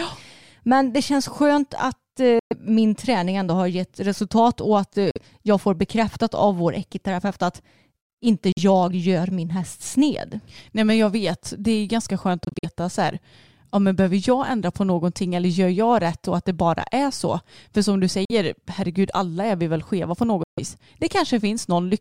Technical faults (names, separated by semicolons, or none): Bluetooth dropout